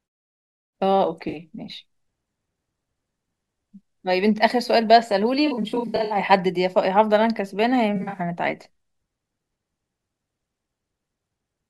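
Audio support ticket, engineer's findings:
AAC frame loss with concealment at 1.29 to 1.35 s, 5.46 to 6.18 s and 7.96 to 8.19 s. The decoder's frames dropped out and it patched the gaps from the last good spectrum. First hit: about 43 ms lost, consistent with two frames, heard as a brief smeared, noisy patch. Second: losses scattered over 640 ms, runs up to around 70 ms, about 363 ms missing in total, giving repeated phasey, grainy smearing. Third: about 128 ms lost across 171 ms, runs near 40 ms, the same smeared texture. Muted pauses fade the background out between phrases as intended.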